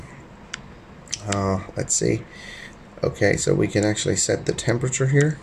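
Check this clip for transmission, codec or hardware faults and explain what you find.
Nothing here stands out to my ear; I listened the whole way and didn't catch a single fault.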